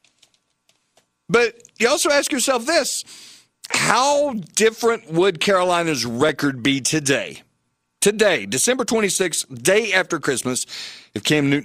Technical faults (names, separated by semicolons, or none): audio missing between chunks